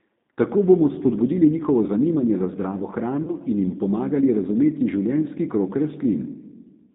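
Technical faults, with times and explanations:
throughout: G.729 codec. The speech is coded at 8 kbit/s and confined to a 150 Hz to 3.7 kHz band. The result sounds plainly rough and synthetic.
3.23 to 3.33 s: VoIP packet loss concealed by the speech codec. About 40 ms goes missing after "njihovo zanimanje za zdravo", which fits two lost packets. The decoder stretches its last sound into a fading buzzy tone or coloured noise. The speech stays weak or distorted for tens of milliseconds after the packets return, into "in jim pomagali razumeti".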